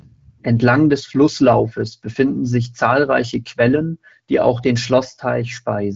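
Speech comes through the AMR wideband (HD Voice) codec at 12.65 kbit/s, with content stopping around 7.7 kHz as that wideband path implies, and no technical fault can be heard in the signal.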